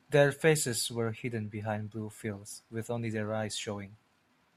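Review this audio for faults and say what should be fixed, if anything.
No faults turn up anywhere in the recording, so nothing needs to be fixed. With nothing wrong to trace, there is also nothing here that calls for prevention.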